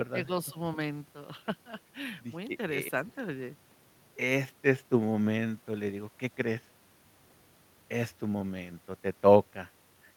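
Between 0.12 and 0.3 s, an echo canceller likely caught in double talk could not separate the talker from the loudspeaker echo and turned both down. This speech suppressed in double talk produces dips of roughly 10 dB at the deepest, totalling about 70 ms.

At 0.49 to 0.53 s, the echo canceller on the loudspeaker side likely failed to remove everything its microphone picked up, and the remainder was sent back. This echo leak is heard as a faint scrap of the speech delayed by 263 ms, around 30 dB below the voice.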